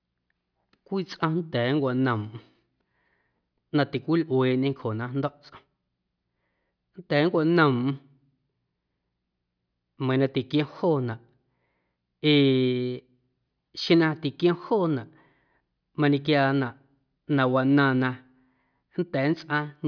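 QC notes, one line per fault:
No fault to note.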